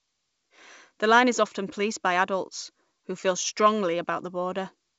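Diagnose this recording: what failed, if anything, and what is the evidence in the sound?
Nothing failed in this recording: the speech comes through as ordinary G.722 wideband telephone audio, with nothing above about 7.7 kHz.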